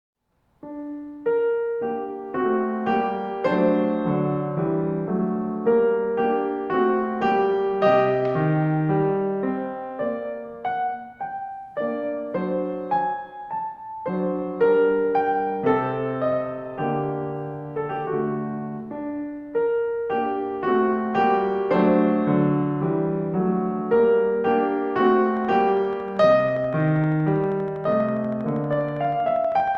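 A source of periodic pulses, likely interference from nearby equipment or a faulty connection or power supply, injects a train of clicks into this music clip from 25.37 s to 29.76 s. The clicks arrive at a steady 12.5 per second, around fifty in all, each with much the same shape and peaking at roughly the level of the music itself. The result is a regular ticking that sits on top of the music right through to the end.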